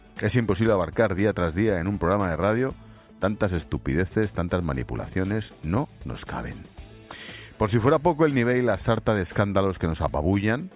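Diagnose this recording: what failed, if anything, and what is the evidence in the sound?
Nothing in the chain seems to have failed here, so there's no stage to point at and no evidence of a fault to walk through.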